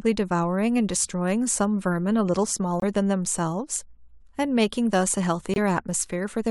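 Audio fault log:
2.80–2.84 s and 5.54–5.58 s: corrupt frame muted. Damaged compressed frames were rejected by the decoder and replaced with silence, leaving abrupt gaps of about 40 ms in the speech with timing preserved. The waveform drops sharply to a flat line, and the spectrogram shows a clean vertical blank band.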